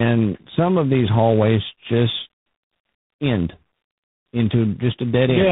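A speech clip carrying tandem speech coding throughout: rough, muffled and warbly, which points to a narrowband mobile codec followed by two low-rate ADPCM stages, each re-coding the previous one's damage. A spectrogram shows nothing above 3.8 kHz and smeared, blotchy harmonics.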